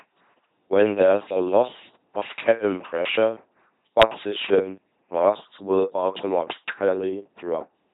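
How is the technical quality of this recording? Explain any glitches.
Quality is poor throughout. The speech has passed through an LPC-10 vocoder, and the damage is heavy. Each moment is rebuilt as pure buzz or pure hiss through a short vocal tract filter. Voices sound robotic and mechanical. Nothing exceeds about 3.9 kHz, and the rate is 2.4 kbit/s.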